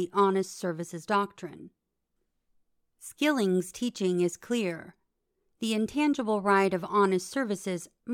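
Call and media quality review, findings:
No faults found in the speech signal; level, continuity and timing hold steady throughout the clip.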